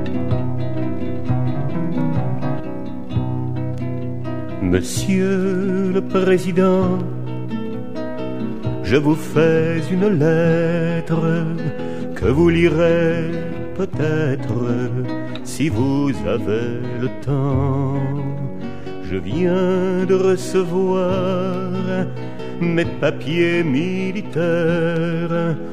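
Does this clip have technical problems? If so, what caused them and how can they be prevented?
Yes. A doubled audio track runs from the start to 2.60 s, an equally loud full-band copy trailing by about a second, likely from a duplicated capture path. The waveform shows each event repeated a second later, ending abruptly. Prevent it by routing only one capture path into the mix.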